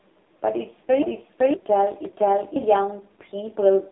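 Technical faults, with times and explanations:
Throughout: AMR narrowband mobile codec. The speech sits in a telephone band of roughly 300 Hz to 3.7 kHz, coded at 5.9 kbps with heavy damage, so it sounds buzzy and synthetic. Unlike plain band-limiting, the harshness comes from the vocal-tract model straining at so few bits.
1.02 to 1.54 s and 2.05 to 2.56 s: repeated buffer. Each 512 ms stretch plays twice with a hard join, which fits an 8192-sample buffer, and about half a second of new audio is lost each time. A half-second stretch recurs, so this is a repeat rather than a dropout or click.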